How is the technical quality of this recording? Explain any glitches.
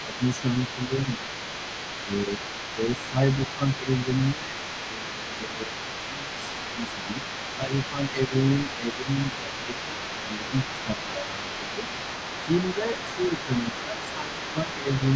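The recording has two echo-related problems that run through most of the clip.

A second voice sits underneath the speech from start to finish, roughly 15 dB quieter. This is other side's voice leaking through, most likely loudspeaker playback of the far end that the echo canceller failed to fully remove from the microphone.

The main speech repeatedly sinks while that other voice is active. This happens from 0.03 to 1.33 s, with dips of about 10 dB over roughly half a second, and from 2.0 to 11.79 s, with shallower dips of about 5 dB over roughly four seconds in total. It happens again from 12.46 to 15.02 s, with dips of about 10 dB over roughly a second and a half. This is speech suppressed in double talk: the canceller likely couldn't tell the talker from the echo and turned both down. The missing top above 8 kHz belongs to normal call microphone processing, not to these faults.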